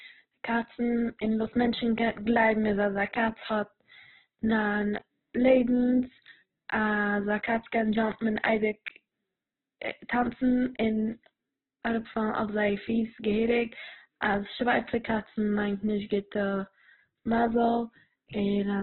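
Heavy Opus compression is likely, running through the whole clip. Nothing survives above about 4.1 kHz, so the speech sounds narrow and muffled. Starved bands are filled with folded or noisy content. Tones turn grainy and rough. This fits a bitrate near 8 kbps.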